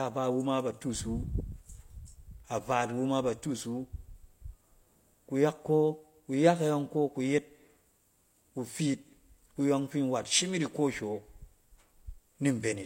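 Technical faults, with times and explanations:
Throughout, low-bitrate audio saved at a high bitrate: the speech was likely squeezed through a low-bitrate codec before being re-encoded as MP3 at a generous rate, which fits a chain of roughly 32 kbit/s then 256 kbit/s. Nothing sounds above 16.3 kHz, and the earlier encoding's losses stay audible despite the larger file.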